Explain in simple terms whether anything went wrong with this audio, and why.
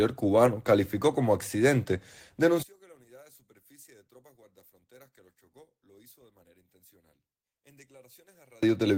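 One channel inverted, from about 2.63 s to 8.63 s: at that point the speech suddenly drops to a faint trace and stays that way for six seconds. The likely cause is that one side of the stereo recording was flipped upside down. When both sides are combined into a single channel, the flipped side cancels the matching sound on the other side, so the centred voice almost disappears and only the small differences between the two sides remain.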